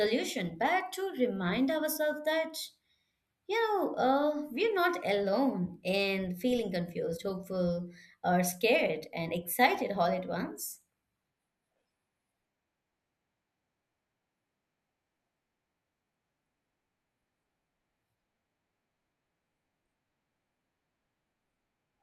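No technical faults are audible.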